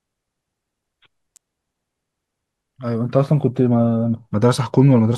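At 1.36 s a single sharp snap cuts across the speech, a brief tight burst of clicks that sits on top of the talking rather than replacing it and peaks at about -25 dBFS. It has the hard, instant onset typical of an electrical switching spike. The likely cause is a nearby switch, motor or static discharge arcing for a moment, with the audio line picking up that burst of interference.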